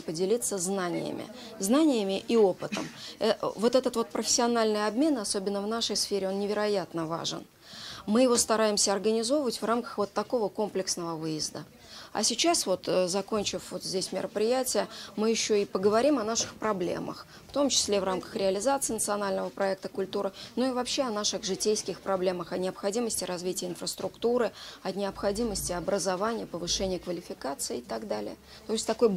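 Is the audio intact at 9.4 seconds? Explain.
Yes, at 9.4 seconds the audio is intact, with no dropout, click, distortion or other fault at that moment.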